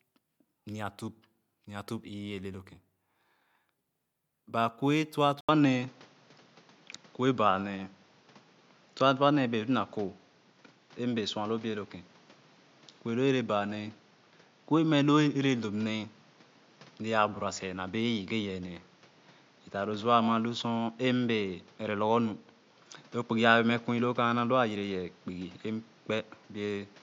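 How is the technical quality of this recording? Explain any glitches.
The recording has one clear fault, from 5.41 s to the end. An input switched to a poorer device at 5.41 s. The likely cause is the system changing to another microphone. After an 80 ms gap, the speech has nothing above 7.2 kHz and sounds dull, its level shifts by a few dB, and a new background noise sits roughly 30 dB below it.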